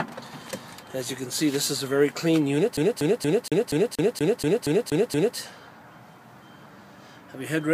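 From 2.77 s to 5.37 s, a scratch on the disc keeps throwing the laser back one track at the same point on each rotation, so the player is stuck on one turn. The same 237 ms slice of audio plays eleven times in a row, each pass cut off by a brief mute as the pickup jumps back. The result is the rapid, evenly spaced stutter of a skipping CD, locked to a steady repeat of roughly four per second.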